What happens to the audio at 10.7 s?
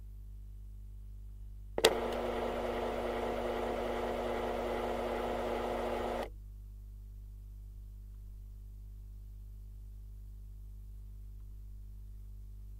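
Nothing goes wrong at 10.7 s; the sound plays through that moment intact, with no dropout, click or distortion to be heard.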